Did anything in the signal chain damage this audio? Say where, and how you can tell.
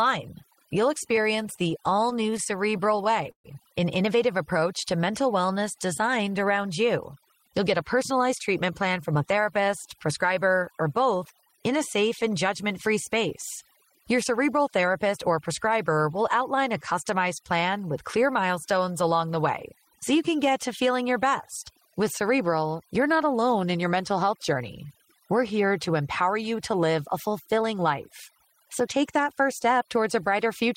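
Yes, several stages left marks on this speech. Throughout, there's overdone noise removal in the call processing: the background has been pushed well down with little twinkling specks left in it. That's a noise suppressor set far too hard, cutting individual frequency bands whenever they sit close to its noise estimate, so the quieter parts of the voice get taken out along with the noise.

From 1.03 to 3.47 s you get repeated stalls (stutter), which point to the network feeding the jitter buffer. There are 25 little holds in that stretch, about 368 ms of filled-in sound in all, with the longest around 133 ms, so roughly 15% of the span is concealment. Nothing is actually missing. The receiver ran dry over and over and kept stretching the last bit of sound until fresh packets turned up, which gives that dragging, catching quality.

Right after "an innovative", from 4.54 to 5.55 s, there's a jitter buffer slow-down before "designed around". 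Playback drops to about 93% speed with the pitch unchanged, and roughly 78 ms gets added, so sounds feel drawn out. The buffer was low, so the receiver padded it by repeating single pitch periods and slivers of pause until it had a bit of reserve again.

Then there's jitter buffer speed-up in three places. From 7.40 to 10.63 s, ending just before "or both in a", it runs at about 106% and a couple hundred milliseconds go missing. After "get to feeling your", 21.63 to 21.97 s runs at 109% and loses roughly 40 ms. From 27.47 to 27.85 s it runs at 114% and loses roughly 70 ms. Pitch holds steady but the delivery sounds hurried. The buffer had overfilled, likely from delayed packets landing together, so it trimmed out short pitch-period chunks to pull the delay back down.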